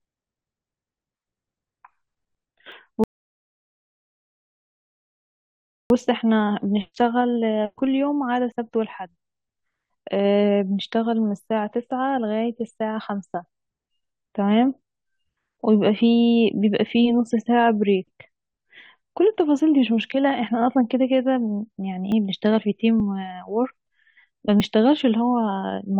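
Speech with two kinds of fault. Small forward jumps in the sound occur at 2.72, 6.4, 8.52, 22.12, 23.0 and 24.6 s, each losing a few tens of milliseconds, likely a dropped buffer (overrun), seen as abrupt waveform discontinuities and thin vertical lines on a spectrogram. A rebuffering stall silences everything from 3.04 to 5.90 s, adding about 2.9 s before resuming exactly where it stopped, visible as a flat waveform and blank spectrogram band.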